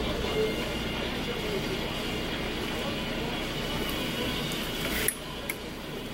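Nothing in this audio stands out as a technical fault, so there's nothing to point to here.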